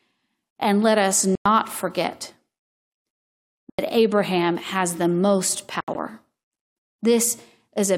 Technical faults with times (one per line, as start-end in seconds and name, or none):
1.35-1.46 Bluetooth dropout
3.70-3.79 Bluetooth dropout
5.81-5.95 Bluetooth dropout